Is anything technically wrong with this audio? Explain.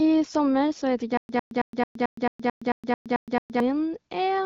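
Yes. From 1.17 s to 3.60 s the speech breaks into a stutter with silent gaps. A short burst of about 103 ms repeats, then drops into about 117 ms of dead digital silence. The cycle returns every 221 ms, eleven times in a row. The likely cause is a stalled player or stream that replays its last fragment at each retry and then runs dry. The speech that belonged in that stretch is simply missing. Throughout, the AMR-WB wideband coding caps the band near 7 kHz.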